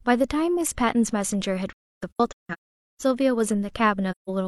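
From 1.69 to 3.02 s and again from 4.11 to 4.30 s, AAC frame loss with muting leaves soft-faded silent gaps where the decoder zeroed missing frames, the longest run being roughly half a second.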